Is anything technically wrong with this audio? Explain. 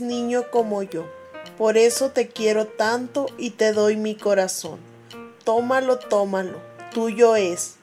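Yes, there's one glitch. At 0.92 s a single sharp snap lands on top of the audio, an electrical switching spike. It's likely a nearby switch or static discharge arcing briefly and the line picking it up. It's short and peaks around -20 dBFS.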